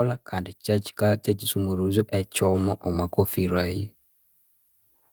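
From 0.65 s to 3.93 s the level climbs steadily by about 7 dB, a case of automatic gain rising: the gain control judged the input too quiet and raised its gain gradually. Because the gain acts on everything, the speech and the background noise swell together over those three seconds. On a waveform the envelope widens like a slow ramp; on a spectrogram all frequencies brighten together, including the noise floor between phrases.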